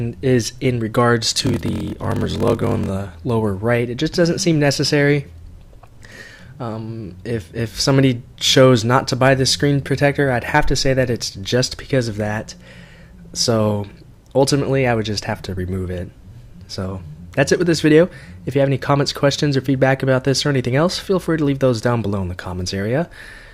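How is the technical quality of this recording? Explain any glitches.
The recording has one glitch. From 1.30 to 2.90 s, a block size mismatch (padded) zero-fills each short block, which fits 1024 samples. This causes a 41.7 Hz buzz and 0.889× slowdown, and regular gaps appear on the waveform.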